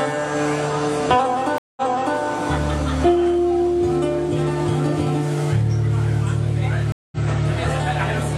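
At 1.58 s a stream reconnect occurs: the connection drops, sound stops for 185 ms, and a new decoder picks up mid-stream, resuming 418 ms earlier than where it broke off, so that stretch repeats as the server resends buffered data. The disturbance ends by 2.19 s. A second reconnect at 6.92 s gives 197 ms of silence and a 93 ms step back, settling by 7.21 s.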